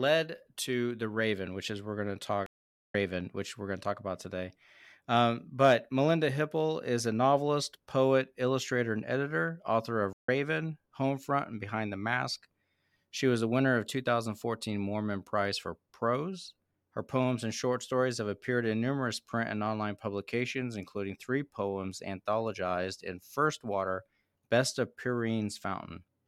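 At 2.46 s, after "we're going to talk", there's a stream reconnect: 470 ms of silence, then it picks up about half a second later at "which we're going to". Again at 10.13 s after "and editor author of": 142 ms gap, roughly 150 ms skipped. The connection dropped and a fresh decoder restarted mid-stream.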